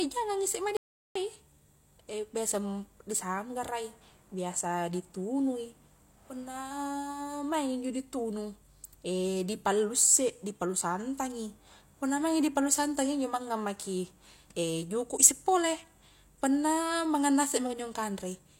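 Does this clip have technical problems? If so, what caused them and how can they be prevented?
Yes. An audio dropout to silence runs from 0.77 to 1.15 s, leaving about 0.39 s of dead silence, most likely from a briefly lost input connection. Prevention: secure cables and wireless links, and monitor input levels during recording.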